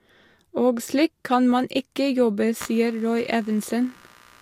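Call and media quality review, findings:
Computer activity noise from 2.60 s to the end, after "kan man ikke jobbe": load changes on the shared audio ground cause noise pulsing near 70 Hz, roughly 25 dB under the speech.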